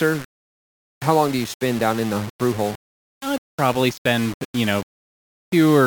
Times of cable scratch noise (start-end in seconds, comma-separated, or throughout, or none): none